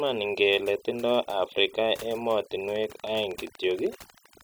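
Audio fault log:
Throughout: overdone noise removal. Individual frequency bands near the estimated noise floor are pushed far down or switched off, taking the quiet parts of the speech with them. The pauses fall to near silence with twinkling specks. Ordinary hiss would be steady and broadband, not sparkling.
2.68 to 4.42 s: train of clicks. Around twenty near-identical pulses arrive at a regular 12.7 per second, peaking a few dB above the speech and ticking through the pauses too. The likely cause is interference from nearby equipment or a faulty connection. Their even spacing and uniform shape set them apart from random crackle.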